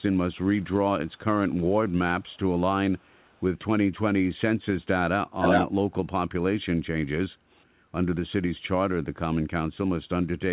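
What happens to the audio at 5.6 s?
An echo leak runs from 5.41 to 5.67 s: a delayed copy of the speech, about 0.38 s late and about 5 dB louder than the direct sound, likely from incomplete far-end echo cancellation.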